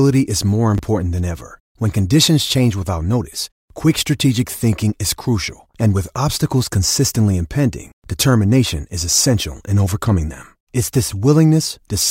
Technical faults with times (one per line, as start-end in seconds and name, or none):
0.75-0.79 chunks out of order